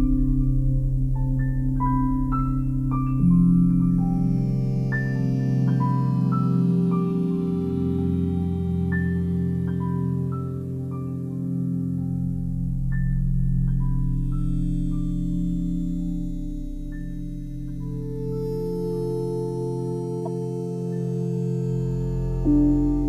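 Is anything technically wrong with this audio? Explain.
Yes. At 20.21 to 20.28 s there is a corrupt frame decoded. Damaged bits in one compressed frame were played anyway, placing energy at wrong frequencies. It sounds like a brief chirp or noise burst, peaking around -20 dBFS, fitting one frame.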